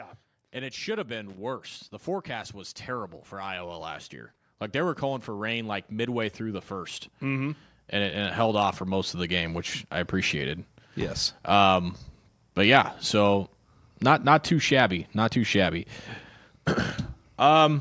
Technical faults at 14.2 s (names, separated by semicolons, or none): none